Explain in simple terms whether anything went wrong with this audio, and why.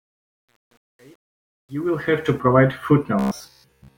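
The fade-in at the start has truncation distortion, from 0 to 2.4 s. The speech swells up, but the quiet part sounds gritty, worst from 0 to 1.94 s. The volume stage kept too few steps, about 9 bits, with no dither.

From 3.19 s to the end, the speech turns robotic. It becomes a stiff, metallic buzz at 66.8 Hz. The likely cause is repeated short buffers: a slice of about 15 ms gets replayed while most of the real audio is skipped.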